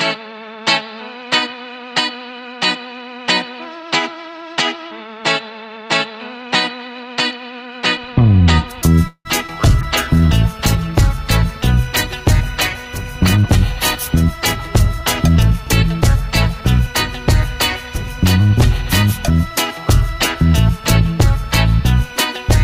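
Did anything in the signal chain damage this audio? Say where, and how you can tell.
Yes. Five faults in the call path damage the audio between about 9.1 s and 16.9 s.

The call audio freeze runs from 9.07 s to 9.27 s, at the network and receiver stage. The sound stops progressing and is carried on as a fading buzz or hiss, then about 70 ms of silence, before it resumes where it left off. This adds a 176 ms gap and loses nothing. The likely cause is delayed packets draining the jitter buffer. On a spectrogram, the last spectrum is smeared forward and decays into a blank column.

Short concealed packet loss follows at 9.47 to 9.50 s. About 40 ms of audio never reached the decoder. The receiver bridged only about 10 ms by extrapolating the preceding sound, so roughly 30 ms of delay is taken out there. It sounds like a brief smear where content drops out. On a spectrogram, the preceding sound is carried on, blurred, across the join.

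A jitter buffer slow-down spans 9.55 to 10.29 s. To rebuild its reserve, the receiver repeated single pitch periods or pause fragments, adding 49 ms. The audio plays at 94% speed with unchanged pitch, so sounds are drawn out. On a waveform this shows as identical repeated cycles. On a spectrogram, features are stretched in time while harmonic spacing stays the same.

The call bitrate drop covers 9.83 to 15.57 s, when the codec's budget fell from 64 kbps to 26 kbps and stayed at the lowest rate for about 4.8 s. The encoder had to quantise far more coarsely, which makes the sound rough and watery until the rate recovers near 15.6 s. On a spectrogram, fine detail gives way to a blotchy, patchy texture that sharpens again afterwards.

A jitter buffer speed-up runs from 13.36 to 16.94 s, overlapping the low-bitrate stretch. Excess buffered audio was trimmed by dropping short pitch-period pieces, removing around 200 ms in total. 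Playback runs at 106% with the same pitch and sounds hurried. A spectrogram shows events packed closer together with unchanged harmonic spacing, and on the waveform, cycles splice together with subtle discontinuities.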